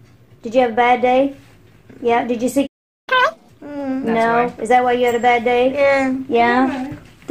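At 2.66 s the sound stops dead mid-flow and stays silent until 3.09 s, a gap of about 0.41 s. This is a playback stall, likely the player running out of buffered data or its output thread being blocked. Unlike a dropout, where the audio keeps running underneath and a stretch is lost, nothing is skipped here. When output returns, the sound picks up exactly where it was cut off.

From 3.09 s to 3.50 s the resumed audio plays at twice normal speed, with pitch raised by roughly ten semitones. This is catch-up at higher speed. The player is resampling its backlog to win back the time lost in the stall. What separates it from a plain pitch-shift fault is that tempo and pitch jump together. The effect lasts only that short burst and then snaps back to normal rate.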